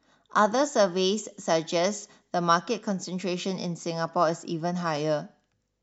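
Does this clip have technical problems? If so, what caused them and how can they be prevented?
No, there are no technical problems to hear in this clip. With no fault present, there is no cause to trace and nothing that needs preventing.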